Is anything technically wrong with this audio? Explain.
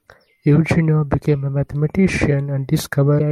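Yes. From 3.16 to 3.21 s near the end of this speech, a brief glitch cuts in. This is damaged data in a compressed stream: corrupted bytes made the decoder misread frames and lose sync.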